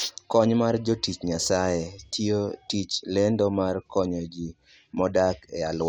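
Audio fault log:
Nothing stood out on listening to this speech recording.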